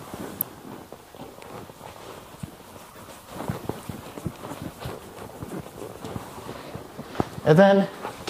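The audio has three corrupt frame events decoded. A loud glitch hits at 0.41 s, from one damaged frame. A fainter glitch runs 2.91 to 2.99 s, spanning about three frames. A moderate glitch follows at 4.24 to 4.30 s. Flipped bits put energy at wrong frequencies.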